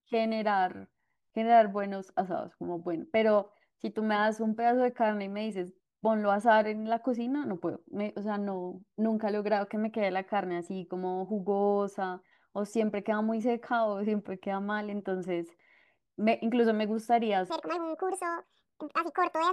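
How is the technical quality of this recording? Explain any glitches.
A section at the wrong speed spoils the end. From 17.50 s to 19.53 s the speech turns hurried and squeaky, running 1.7 times too fast and roughly ten semitones higher. Pitch and tempo shift together, likely from that stretch being played against the wrong clock.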